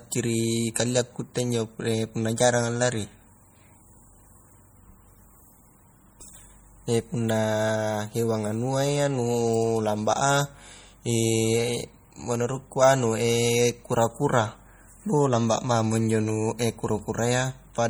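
Throughout, the speech sounds watery and swirly, with chirpy metallic edges on s sounds and smeared attacks, though content still reaches about 21.1 kHz. This is likely MP3 compression at a low bitrate, around 48 kbps, where weak frequency lines flicker on and off between frames.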